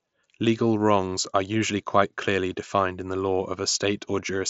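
Nothing in this clip stood out as a fault on listening.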